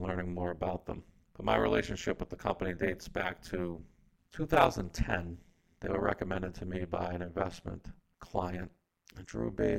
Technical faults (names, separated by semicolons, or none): overlap-add ripple